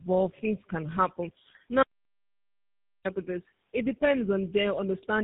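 The whole clip carries tandem speech coding, with AMR-NB and then GSM full rate, the later coder chewing on the earlier one's output, so it's rough, warbly and muffled, with nothing above 3.8 kHz. After "things can happen", at 1.83 s, there's an audio dropout to dead silence with no room tone until "I put this" at 3.05 s, likely from lost input.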